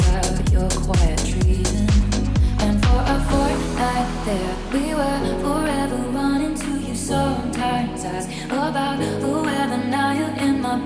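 No technical faults can be heard anywhere here.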